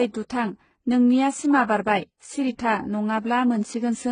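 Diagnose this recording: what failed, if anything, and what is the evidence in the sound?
At the codec stage, transcoding between lossy codecs likely occurred, fitting a very low-rate HE-AAC encode re-encoded as AAC-LC. Throughout the speech, nothing remains above 9.7 kHz, and both codecs' artefacts are heard layered together.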